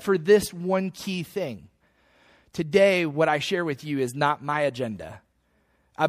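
MP3 compression damage runs through the whole speech clip, likely from a low-bitrate encode around 64 kbps. Short of bits, the encoder has cut the treble and let weak frequency lines drop in and out between frames, so the sound turns watery and swirly, s sounds chirp metallically and onsets smear.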